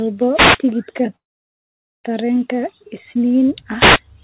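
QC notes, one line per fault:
0.33–0.59 s and 3.78–4.00 s, wireless microphone noise hit: the radio link of an analogue FM microphone dropped into a fade, probably as reflected signals cancelled at the receiver. With the carrier weakened, receiver noise rose over the speech, giving a short swish of static of about a quarter second each time. The second hit comes just after "tareen isniin". Both bursts sit inside the 4 kHz band of the call path, which fits G.711 mu-law at 64 kbps.
1.16–2.06 s, call audio freeze: packets were likely held up in transit, so the jitter buffer ran dry. The receiver stretched the last sound briefly into a fading buzz or hiss, then went silent for about 0.83 s of the roughly 0.88 s filled. When packets resumed, the speech picked up exactly where it stopped, at "tareen isniin". Nothing was lost, but a gap was inserted and everything after it runs about 0.88 s late.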